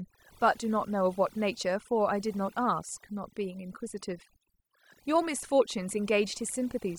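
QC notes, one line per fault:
Throughout: overdone noise removal. The denoiser is set far too hard, so the background drops and breaks up into twinkling specks.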